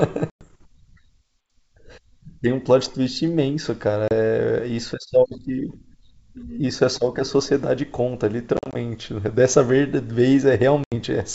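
Packet loss on an ADPCM call breaks the wideband speech four times: a 110 ms silent hole at 0.30–0.44 s, a 30 ms gap at 4.08–4.13 s, 100 ms of short holes scattered across 8.57–8.76 s (the longest about 40 ms), and an 80 ms gap at 10.84–10.95 s. Each lost stretch leaves the decoder's predictor and step size out of step with the sender's. So unlike a clean dropout, the sound comes back with brief, slight distortion before settling.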